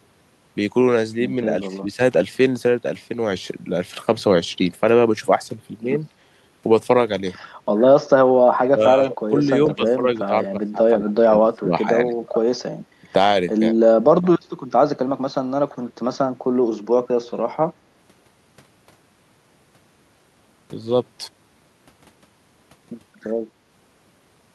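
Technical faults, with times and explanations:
1.65–2.0 s, speech suppressed in double talk: the speech dips by about 10 dB for roughly a tenth of a second, likely because the echo canceller mistook overlapping talk for loudspeaker echo and turned it down.
8.65–8.69 s, echo leak: a faint copy of the speech returns about 145 ms late, around 30 dB below the direct speech. The far end's echo canceller likely failed to remove all of its loudspeaker pickup, so a short scrap was sent back.
8.74–8.82, 9.05–9.35, 9.66–10.08, 10.27–11.88, 12.11–12.45 and 13.02–13.15 s, speech suppressed in double talk: the speech is pushed down, dropping 10 to 25 dB. The deepest and longest loss, about a second in total, falls in 10.27–11.88 s, likely as the suppressor clamps during simultaneous talk.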